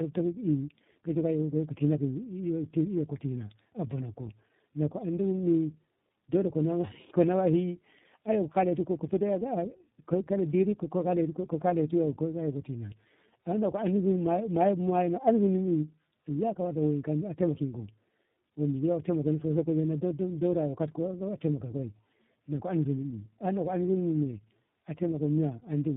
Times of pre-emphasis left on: none

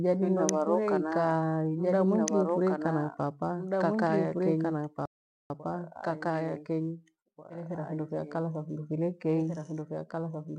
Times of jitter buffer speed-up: none

